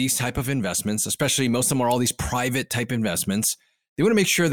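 A short bit of speech with nothing technically wrong to flag anywhere in it.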